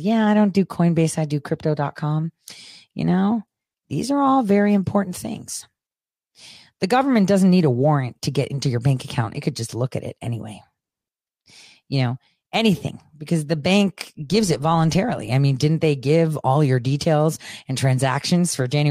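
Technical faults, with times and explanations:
0.12–18.85 s, clock slip clicks: regular ticks about every 70 ms through the speech, likely single-sample slips from two unsynchronised clocks drifting roughly 300 ppm apart.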